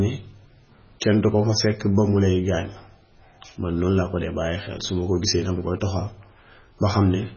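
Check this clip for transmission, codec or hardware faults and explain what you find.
One fault runs through the whole clip. MP3 compression, throughout: the speech has nothing above 6.6 kHz and sounds watery and swirly, with metallic chirps on s sounds and smeared attacks. This is likely a starved MP3 encoder, which fits a bitrate around 16 kbps, cutting the treble and zeroing weak frequency lines that flicker between frames.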